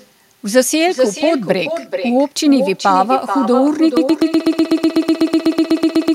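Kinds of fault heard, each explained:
Echo with no canceller: Every phrase is shadowed by a quieter, thinner copy arriving roughly 400 ms later. It sits about 9 dB below the speech. The far end is playing the call through a loudspeaker. Its microphone catches that playback, and nothing subtracts it. The sound travels there and back through the network before returning.
Broken-record loop: From 3.97 s to the end, a 124 ms fragment repeats back to back, 18 times. The result is a rapid stutter at about eight repeats per second rather than continuing speech. The likely cause is a stalled player, encoder or stream that kept resending the last piece it held. Whatever should have played in those final seconds is lost.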